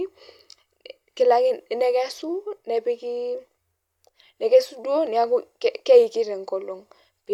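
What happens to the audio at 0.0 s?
At 0.0 s the audio is intact, with no dropout, click, distortion or other fault at that moment.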